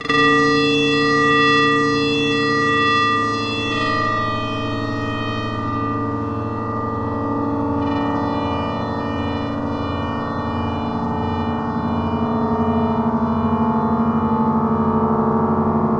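No technical faults can be heard in this recording of sounds. Nothing in it suggests that anything went wrong along the way from capture to playback.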